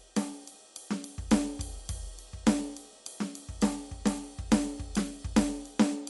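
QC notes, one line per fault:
Throughout, Dolby Digital compression: dull, nothing above 11.4 kHz, rough fluttering noise around tones; likely a low bitrate, consistent with 64 kbps, starving fine detail.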